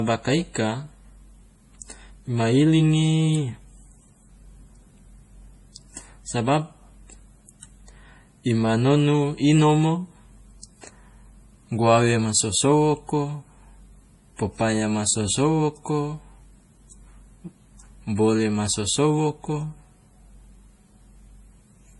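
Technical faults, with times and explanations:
Throughout, transcoding between lossy codecs: nothing above 11.4 kHz, with smeared, warbly artefacts layered together, likely a low-bitrate MP3 re-encoded to WMA.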